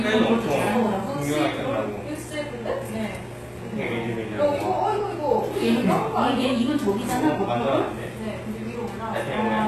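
HE-AAC compression runs throughout the clip and is plainly audible. Nothing survives above 12.3 kHz, and the treble below that sounds gritty and metallic, likely because lower bands are copied upward and loosely shaped, as fits a bitrate near 16 kbps.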